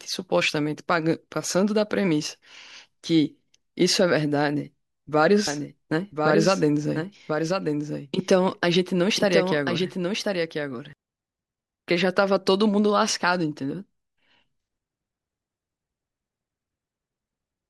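From 5.47 s to 10.93 s a doubled audio track appears: a full-band copy of the speech trails about a second behind, somewhat quieter, likely from a second, slower capture path. It enters and leaves abruptly, and the spectrogram shows every pattern repeated one second later.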